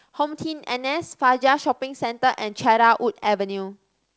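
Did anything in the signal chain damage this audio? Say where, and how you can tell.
No, nothing in this speech stood out as damage on listening, with the G.722 wideband telephone coding at 64 kbit/s doing its ordinary job.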